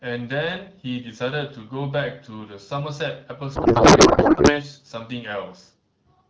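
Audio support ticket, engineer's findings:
Codec payload misread, 3.55 to 4.65 s: speech replaced by garbled noise and warble barely tracking it. Not loss concealment, because frames keep arriving and decode as valid-looking frames. Points to AMR-WB octet-aligned payload parsed as bandwidth-efficient.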